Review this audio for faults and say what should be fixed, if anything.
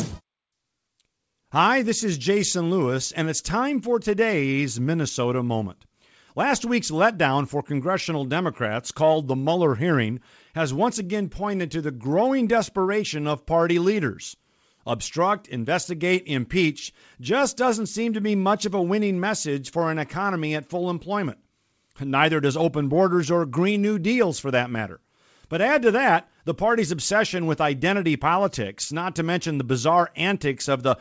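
No faults found; nothing needs fixing.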